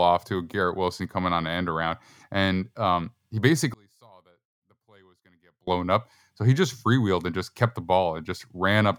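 From 3.74 s to 5.67 s the speech nearly disappears. It drops by about 34 dB to a faint residue, then returns at full level. The likely cause is one channel inverted: with one side's polarity flipped, the speech shared by both channels cancels when they are summed to mono. On a waveform the envelope collapses to a near-flat band across that span, and a spectrogram shows the energy fading to a dim trace.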